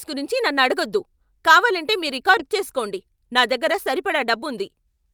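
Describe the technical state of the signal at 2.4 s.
A skip ahead occurs at 2.39 to 2.41 s, just after "నన్ను అడగొద్దు కావాలంటే మీ". About 0.4 s of speech is dropped. Playback jumps straight forward without a gap.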